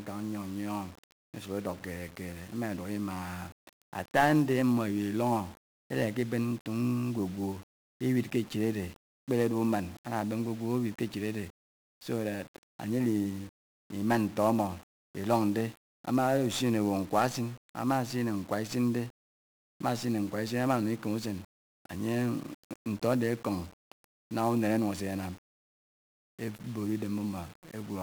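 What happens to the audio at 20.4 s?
At 20.4 s the speech carries 1-bit DFPWM compression, present throughout. Each sample steers an adaptive level up or down, leaving fuzzy, crackly noise and hiss-buried treble.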